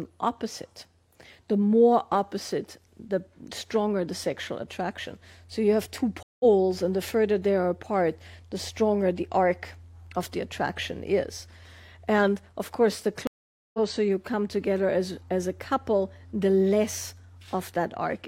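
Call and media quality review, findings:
Stream reconnects at 6.23–6.45 s and 13.27–13.79 s: dropped connection, player silent 172 ms then 466 ms, fresh decoder started mid-stream. Audio resumes roughly 0.1 s and 0.4 s further on, with content skipped and first frames faded in.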